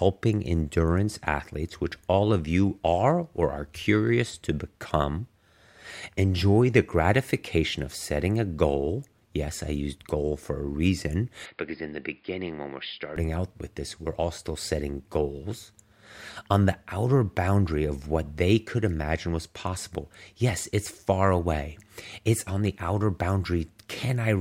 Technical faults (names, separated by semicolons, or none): input switched to a poorer device